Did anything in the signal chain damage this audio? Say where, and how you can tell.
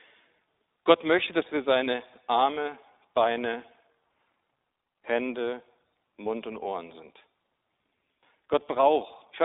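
Yes. The damage comes from the codec stage: the speech runs through an iLBC codec for the whole clip. Its audibly rough, slightly synthetic texture comes from each short frame being coded independently, with a 20 ms frame rhythm that fits iLBC's 15.2 kbps mode. A spectrogram shows an empty band above 3.8 kHz and little energy below 300 Hz, the footprint of a narrowband 300 Hz to 3.7 kHz telephone line.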